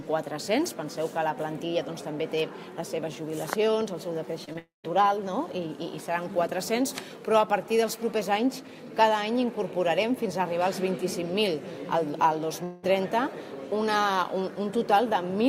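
At 4.45 to 4.49 s and 4.53 to 4.57 s, short concealed packet loss: about 20 ms goes missing each time and is patched over, leaving brief smears or wobbles rather than gaps. From 4.59 to 4.86 s the sound stretches into a fading buzz or hiss, then about 0.15 s of silence, likely a long network dropout. Around 12.64 to 12.85 s a similar fade with no silence points likely to another.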